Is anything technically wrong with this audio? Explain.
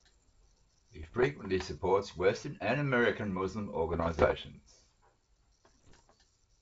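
Yes. The speech carries bit errors on an ADPCM link, heard in three bursts at 1.01–1.33 s, 3.92–4.34 s and 5.78–6.01 s, on top of clear G.722 wideband coding. Corrupted bits, on the order of one percent, throw off the decoder's step size and predictor, so each hit rings on briefly as pops and rough, gritty bursts with jumpy level. A waveform shows sudden spikes and uneven envelope steps; a spectrogram shows vertical broadband streaks smearing across the bands.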